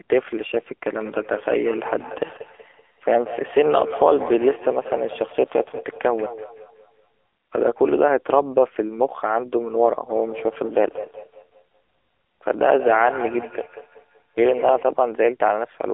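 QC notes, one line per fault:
Throughout: AMR narrowband mobile codec. The speech sounds boxy and buzzy, with a thin synthetic edge and no air or sibilant sparkle, since nothing above about 3.6 kHz survives and the low end sits inside a 300 Hz to 3.5 kHz telephone band. The damage is plainly audible, which fits a low bitrate around 7.4 kbps, where the codec rebuilds the voice from a coarse vocal-tract model fed by only a few pulses per frame.
1.00–7.29 s and 10.09–14.93 s: feedback echo between two devices. Each phrase comes back as a fainter, hollow, ringing copy roughly every fifth of a second, the loudest about 13 to 14 dB below the speech. A second device in the same room is replaying one microphone's signal, which that microphone captures again. The local echo canceller only removes its own playback, so the loop keeps circling.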